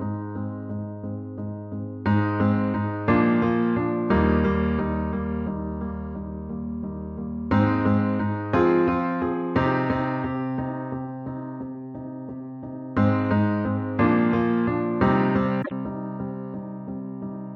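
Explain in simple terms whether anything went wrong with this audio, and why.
One thing went wrong, near the end: damaged data in a compressed stream. For about a tenth of a second, from 15.61 to 15.72 seconds, part of the compressed file was corrupted, with bytes lost, blanked or overwritten. The decoder couldn't read that stretch properly, lost its place and had to hunt for the next clean frame before it could carry on. You hear this as a brief chirp, squawk, click or short hole cutting into the sound at that moment.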